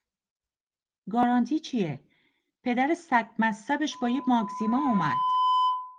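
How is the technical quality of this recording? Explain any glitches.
The recording has two glitches, both in its final two seconds, over speech carrying the light softening of Opus voice compression.

Loudspeaker feedback squeal, 3.92 s to the end: the microphone is picking up its own loudspeaker, and at 1 kHz the loop gain passes one. That tone feeds on itself, swelling over roughly a second and a half into a steady squeal about 5 dB above the speech.

Dropped samples, 4.15 s: a single sharp click cuts through the squeal. The likely cause is a tiny gap of only a couple of samples, a fraction of a millisecond, so the waveform jumps abruptly while no sound is actually lost.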